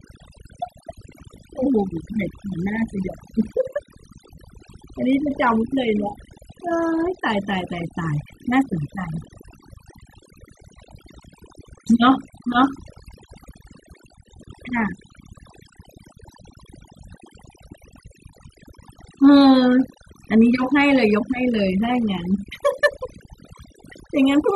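Speech throughout, and the whole clip suffers from overdone noise removal: the denoiser was pushed too hard, so bands near its noise estimate get gated right down, dragging the softer parts of the voice with them. You get near-silent gaps sprinkled with twinkly specks.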